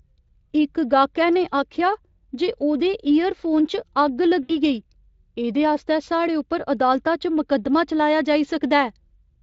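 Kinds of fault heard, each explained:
VoIP packet loss concealed by the speech codec: at 4.43 to 4.58 s a gap of about 60 ms, which fits three lost 20 ms frames, is filled by the Speex decoder repeating its last pitch and spectral envelope while lowering the gain each frame. The speech smears into a buzzy tone or coloured noise that fades, and because each rebuilt frame seeds the next, it stays weak or distorted for a short while after normal decoding resumes.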